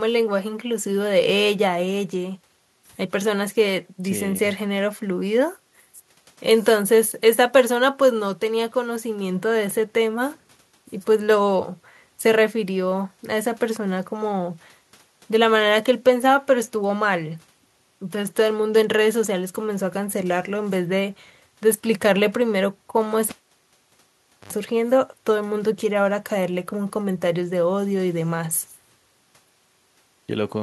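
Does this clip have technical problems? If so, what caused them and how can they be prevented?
Yes: a cable pulled and plugged in at 23.29 s. A pop, about 1.19 s of near silence, an 80 ms burst of 50 Hz mains buzz as the plug tip touches, then a second pop at 24.53 s. That buzz sets it apart from a plain dropout. Secure connectors and mute the channel before repatching.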